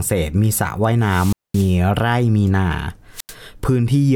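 At 1.00 to 1.79 s and again at 3.13 to 3.35 s, the speech suffers a wireless microphone squelch dropout. The radio link fades, hiss rises, and the receiver's squelch mutes the output for about 218 ms, then 86 ms, before the speech returns.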